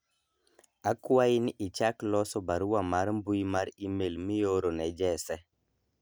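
No technical faults are audible.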